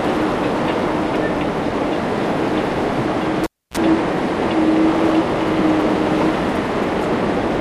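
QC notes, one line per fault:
3.44–3.77 s, cable pulled and plugged in: a live connector is yanked and reinserted. A sharp pop opens a gap of about 284 ms of near silence, then roughly 36 ms of 60 Hz mains buzz while only the plug tip makes contact, and a second pop as the signal returns. On the waveform there are two spikes bracketing a flat line with a short, dense ripple before the second spike. The spectrogram shows broadband vertical streaks at each pop and a 60 Hz harmonic comb during the buzz.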